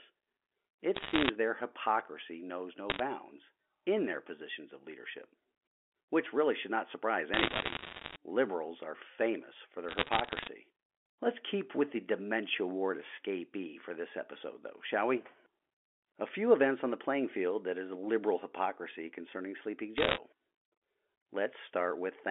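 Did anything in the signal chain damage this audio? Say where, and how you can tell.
Yes: bit errors on a digital phone line, in bursts at 0.95–1.30 s (just before "their hypocrisy knows no"), 2.90–3.00 s, 7.34–8.16 s (after "really should not surprise"), 9.89–10.47 s (after "are famous for") and 19.98–20.18 s. This is transmission damage on the digital link. Flipped bits in the mu-law stream each corrupt a single sample, and hits on the sign or upper bits throw it far off, giving sharp ticks that pile into crackle over intact speech. The bursts sound like error rates of one or two percent, lighter near 10 s.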